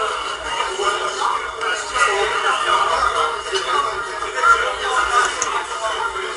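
A recording of sounds, with 4-bit ADPCM compression plainly audible throughout. Gritty hiss rides on every loud moment, following its level. Sharp attacks distort where the step size lags. Nothing sounds above 10.6 kHz, which fits a low sample rate, at a bitrate of 89 kbps.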